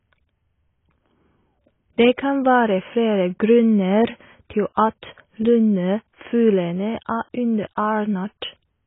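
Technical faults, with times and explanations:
Throughout, AAC compression. The speech is dull and smeared, with nothing above 3.8 kHz. Sibilants turn fizzy and sustained sounds warble. The heavy damage likely comes from AAC-LC at a very low bitrate, near 16 kbps, dropping high bands and coarsely quantising the rest.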